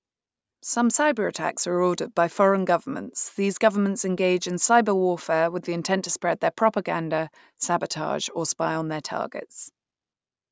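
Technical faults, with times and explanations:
No technical faults were detected in this speech recording.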